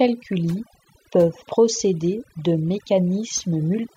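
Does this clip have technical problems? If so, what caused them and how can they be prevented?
Yes. Throughout, the background between the speech falls to near-silent gaps flecked by twinkling specks: overdone noise removal, where bands near the noise estimate were suppressed, taking quiet voice detail too. Use gentler reduction settings and check results by ear.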